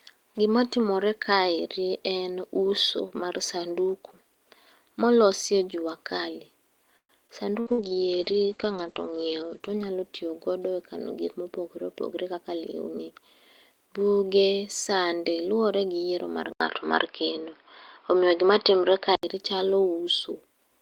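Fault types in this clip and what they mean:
repeated packet loss (robotic sound): Packets kept going missing from 6.97 to 7.81 s, just after "molosi e jua kali". Four gaps, the longest 117 ms, were patched by stretching the previous sound, so about 30% of that stretch is filler and it sounds choppy and robotic.
jitter buffer slow-down: The receiver's buffer ran short, so it repeated tiny slices of audio to rebuild a reserve. From 7.45 to 8.00 s this adds about 36 ms, and the speech plays at 95% speed, slightly drawn out while the pitch stays unchanged.
call bitrate drop: The estimated bandwidth fell and the encoder went from 32 to 10 kbps, staying at the lowest rate for 1.43 s. Between 7.71 and 10.50 s the coding turns coarse and the top end shrinks from 20 kHz to 8 kHz, leaving the speech rough and muffled.
jitter buffer speed-up: Too much audio had built up in the buffer, so the receiver cut out short pitch-period pieces to reduce the delay. 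After "e kano gik mopogore", from 11.82 to 13.12 s, about a tenth of a second disappears and the speech runs hurried at 108%.
input switched to a poorer device: The capture most likely changed to a narrower-band microphone. After "luwore gi yiero mar", an 80 ms silence at 16.53 s is followed by dull, boxy sound until 19.23 s, with nothing above 5.3 kHz, a level shift of around 5 dB and new background noise about 45 dB down.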